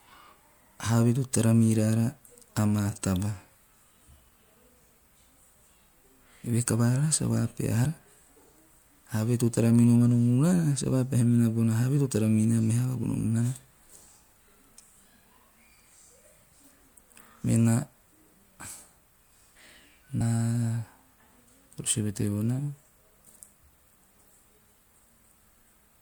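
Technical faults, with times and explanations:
3.54, 7.84, 13.14, 17.44 and 20.2 s, compressed frames skipped: a brief smeared blip as the speech lurches forward, the first just after "tara miraara amaa taba". Between 50 and 100 ms goes missing each time, which fits two to four whole 24 ms frames dropped. Overlap between neighbouring frames blurs each join rather than clicking.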